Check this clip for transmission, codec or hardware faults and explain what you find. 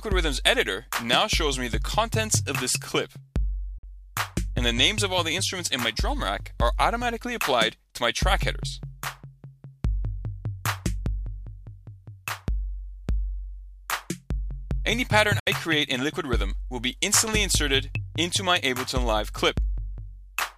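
There are two short dropouts, one near 3.78 s and one near 15.39 s. The sound cuts to silence from 3.78 to 3.84 s, and again from 15.39 to 15.47 s. The edges are abrupt or fade over a few milliseconds. The likely cause is a Bluetooth dropout. Packets reached the headphones too late and were discarded. About 46 ms and about 70 ms of sound are lost, which fits two and three lost packets. Playback then resumes further on, not where it stopped.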